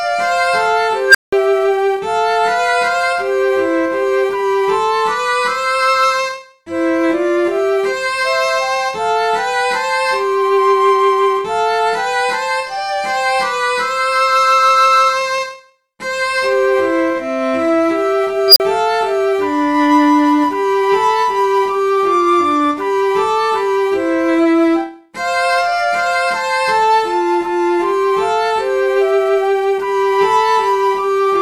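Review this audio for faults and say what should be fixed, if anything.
An unstable filter, a recursive stage whose feedback ran away, twice: 1.08 to 1.33 s and 18.48 to 18.6 s. A tone near 1.5 kHz, then near 5 kHz, swells within 70 to 80 ms, clips, and drops out for 180 ms, then 40 ms. Checking coefficients for stability before applying them prevents this.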